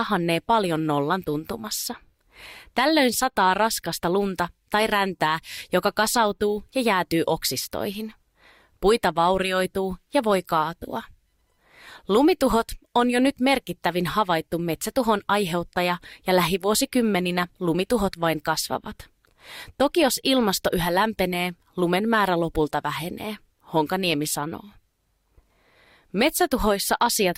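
Nothing to flag here: listening through the whole recording, no technical faults turn up at any point.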